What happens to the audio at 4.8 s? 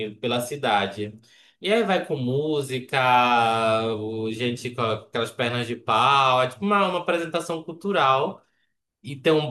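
Nothing goes wrong at 4.8 s; the speech runs on intact through that moment, with no dropout, click or distortion.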